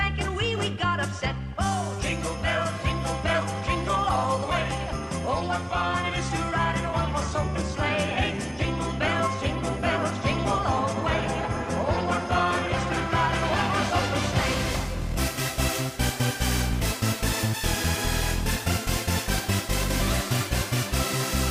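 No technical faults are audible.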